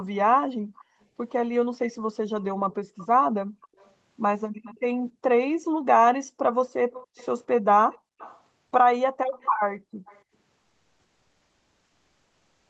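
Echo leak at 0.79 to 1.05 s, 2.42 to 4.79 s, 6.59 to 8.42 s and 9.41 to 10.22 s: a faint delayed copy of the speech trails the original by 282 to 294 ms, creeping slightly later each time. It sits roughly 30 dB below the speech in the first and last stretches and rises to roughly 20 to 25 dB below in the middle two. The likely cause is a far-end loudspeaker whose echo canceller let part of the microphone pickup through and sent it back.

Background gated by the echo canceller from 3.33 to 5.86 s, overlapping the second echo stretch: the room sound dips sharply, by as much as about 40 dB, for around a second in total within that span, then returns. It happens again briefly at 7.98 to 8.19 s, about 200 ms. During those moments the canceller was suppressing the microphone hard while the loudspeaker played, taking the background down with it.

Comfort noise in place of the background from 10.59 s to the end: for the last 2.1 s the real background, about 50 dB below the loudest speech, gives way to a smoother synthetic noise about 2 dB quieter. 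The likely cause is discontinuous transmission in the Opus codec, where the sender stopped transmitting during the pause and the receiver filled the gap with synthetic noise. Throughout, the sound tops out at 8 kHz, as expected on this call path.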